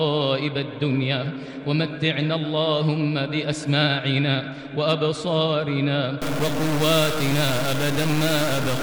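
Stuck bit from 6.22 s to the end: the sound turns harsh and buzzy, and quiet gaps fill with a steady noise floor. The likely cause is one data line frozen, shifting about half the samples by a step of around -25 dBFS.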